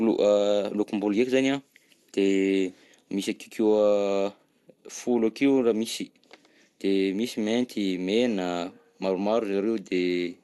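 From start to finish the speech sounds dull and plainly gurgling, with a granular roughness, most likely from MP2 compression at a low bitrate in the region of 80 kbps. Short of bits, the encoder shuts off its upper sub-bands and quantises the remaining ones coarsely. A spectrogram shows nothing above 12.1 kHz, with blocky, flickering patches just below the cutoff as bands switch on and off.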